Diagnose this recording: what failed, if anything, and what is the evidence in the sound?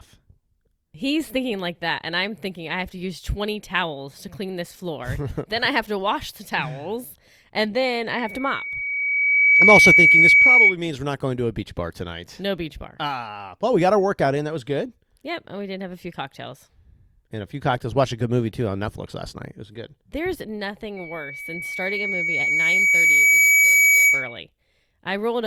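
Loudspeaker feedback squeal from 8.11 to 10.76 s, between "the towels and then" and "means we're not going", and from 20.96 to 24.41 s. A 2.3 kHz tone swells over roughly 1.5 to three seconds to about 10–15 dB above the speech. The microphone is hearing its own loudspeaker, and loop gain exceeds unity there.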